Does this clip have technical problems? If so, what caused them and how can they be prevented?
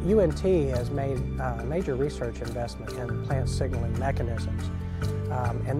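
No, there are no technical problems to address here.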